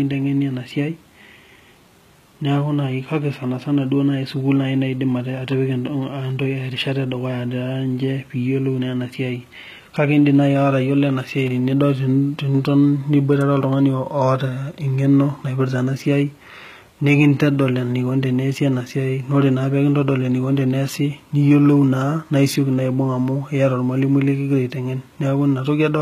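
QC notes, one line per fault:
Throughout: HE-AAC compression, plainly audible on this speech. The treble is not coded directly. It is likely rebuilt by spectral band replication, where lower bands are copied upward and shaped by a coarse envelope. That keeps brightness at a bitrate of about 20 kbps but leaves the upper harmonics misaligned with those below the crossover, so s sounds come out gritty and metallic. Nothing is present above 14.9 kHz.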